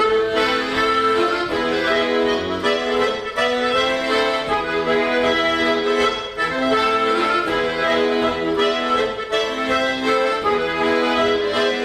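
No technical faults are audible.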